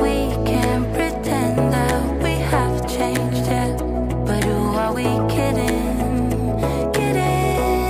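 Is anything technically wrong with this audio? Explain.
No, nothing here sounds technically wrong; it just comes across as a normal, untroubled bit of audio.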